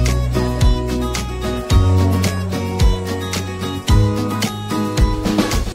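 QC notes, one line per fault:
Nothing to flag here; the audio comes across as it should, with no problems anywhere in it.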